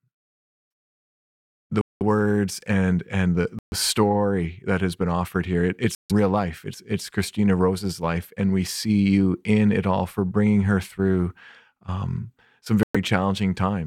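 A Bluetooth stall, likely from interference holding back packets until the headphone buffer ran dry, interrupts this speech four times: at 1.81 s, 3.59 s, 5.95 s and 12.83 s the sound cuts to silence for 196, 132, 148 and 115 ms, then resumes.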